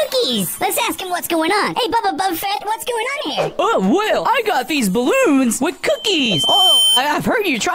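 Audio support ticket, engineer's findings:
Loudspeaker feedback squeal, 5.94–7.03 s. Mic picking up its own monitor/PA output, loop gain above unity at 3.1 kHz. A single 3.1 kHz tone swells over roughly a second until it sits about 5 dB above the surrounding sound, then ends at 7.03 s. Check mic placement and the gain at that frequency.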